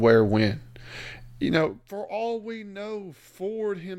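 No technical faults can be heard in this speech recording. The changes in level come across as smooth, deliberate fades, like a fader being moved, with no abrupt jumps.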